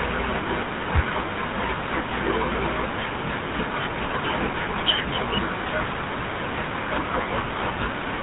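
The speech has passed through a GSM full-rate codec throughout, consistent with a 13 kbps link, leaving nothing above 4 kHz and a plainly buzzy, gravelly roughness.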